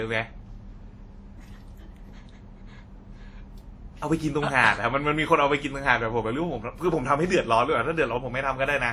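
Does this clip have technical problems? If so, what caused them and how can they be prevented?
Yes. Throughout the speech, two kinds of codec artefact are layered and heard together, with nothing above 20 kHz. This is likely transcoding between lossy codecs, consistent with a WMA encode near 48 kbit/s later re-encoded to Opus at a similar rate. To prevent it, encode once from the original uncompressed recording rather than converting an already compressed file.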